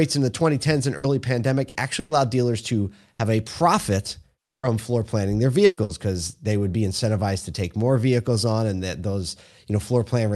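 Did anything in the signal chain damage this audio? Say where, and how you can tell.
Yes. Short held buzzes or fading hiss interrupt the speech at 0.97, 1.69, 1.99, 3.13, 5.65 and 5.83 s, each followed by a skip. This is burst packet loss on the network: the receiver stretched the last sound over 60 ms gaps, or 120 ms at 1.99 and 5.65 s, and that speech is gone.

At 4.45 to 4.66 s the sound smears into a decaying tone that thins to silence before resuming with about 180 ms of speech missing. This is likely a long network dropout, with the jitter buffer concealing and then muting while nothing arrived through the Opus call path.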